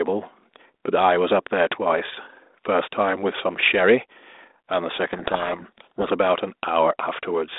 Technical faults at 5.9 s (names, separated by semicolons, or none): codec payload misread